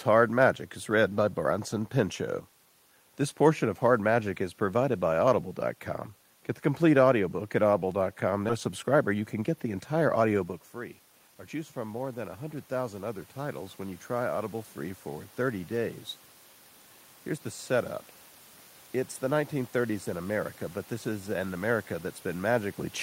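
At 8.49 to 8.51 s there is a skip ahead. About a second of speech never plays. It was dropped while later audio was already queued. Playback jumps straight across with no fill, so the sides join almost directly.

From 8.69 to 11.82 s comes a jitter buffer speed-up. The buffer still held surplus delay. Short pitch-period slices are cut repeatedly, roughly 300 ms in total. Speech runs at 110 percent with unchanged pitch and sounds hurried. The level change near 10.5 s is the talker moving.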